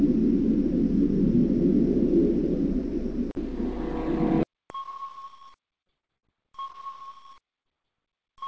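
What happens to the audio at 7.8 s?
Two brief smears, 7.62 to 7.75 s and 7.82 to 7.86 s: short concealed packet loss, where the receiver stretched the preceding sound over 40 ms and 20 ms that arrived too late.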